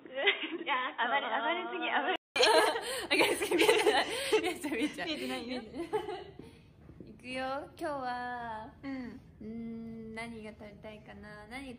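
From the start to about 2.36 s the sound is dull and boxy, with nothing above 3.8 kHz and faint added background noise well under the signal. A 200 ms gap then leads into full bandwidth at about the same level, likely an input switched to a poorer device.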